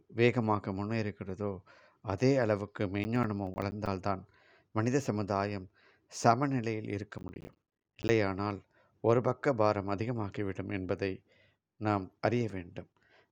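Processor overload crackle hits this speech at 3.04–3.87 s and 7.18–8.09 s: missed buffer deadlines leave runs of silent gaps, each around ten milliseconds, heard as gritty tearing.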